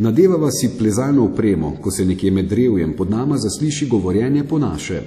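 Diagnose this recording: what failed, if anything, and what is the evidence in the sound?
The codec stage failed. Throughout, the speech rings and sounds washy, with hiss that swells and fades with the signal, likely from WMA compression at a rate that fits roughly 48 kbps. A spectrogram shows nothing above 14.9 kHz, smeared onsets and patchy, missing weak harmonics.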